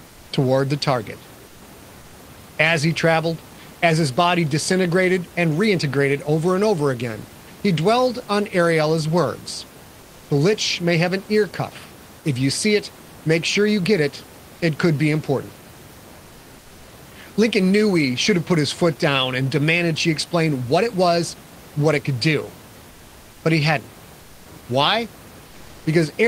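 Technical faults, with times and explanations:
0.07–0.31 s, 1.47–1.61 s, 22.89–23.43 s and 24.19–24.45 s: comfort noise in place of the background. In each pause the room noise gives way to a steady, featureless hiss about 2 to 3 dB quieter, likely discontinuous transmission such as Opus DTX, with synthetic noise filling the gaps.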